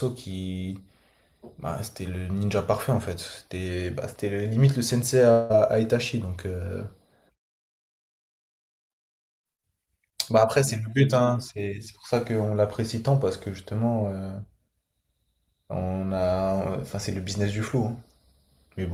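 Speech, with a likely long network dropout from 5.31 to 5.52 s: audio stopped arriving, so the last sound smears into a fading buzz, and about 0.18 s of speech is lost.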